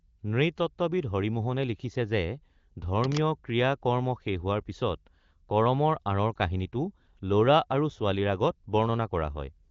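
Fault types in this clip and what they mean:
Cable scratch noise: From 2.97 to 3.20 s a dense, uneven burst of scratchy rustling sits over the speech at roughly 10 dB below it. The likely cause is a worn cable, connector or control being moved. As it shifts, its contact resistance jumps around rapidly, and that erratic variation is added to the signal as a brief crackling layer on top of the voice.
Lost AMR speech frames: Between 6.34 and 6.37 s the speech has a brief dip or warble, a short moment where the sound loses its definition before the voice returns weak or rough for a moment. The short gap fits a single lost 20 ms frame on this wideband (HD Voice) call. A radio error made that frame fail its check, so the decoder filled the gap by reusing the previous frame's pitch and vocal tract settings at reduced gain.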